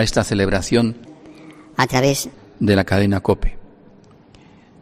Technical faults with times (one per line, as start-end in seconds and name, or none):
1.05-2.34 section at the wrong speed